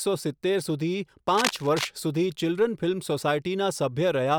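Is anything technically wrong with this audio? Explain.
Yes. Cable scratch noise runs from 1.28 to 1.89 s, likely from a worn cable or connector being moved so its contact resistance jumps erratically. This lays dense, ragged crackling over the speech, roughly 5 dB below it, heard as a brief scratchy rustle.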